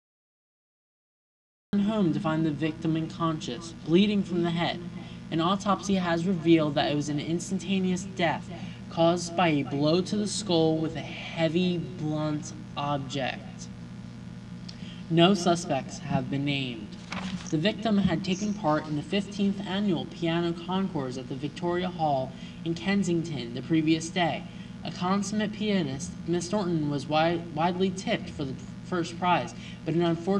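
The clip opens with a cut-off start. From 0.0 to 1.73 s there is only digital silence. At 1.73 s the sound begins abruptly in the middle of an event, with no natural attack or fade-in leading up to it. This happens when recording or streaming begins late, after the sound source is already active, so whatever preceded that moment was never captured.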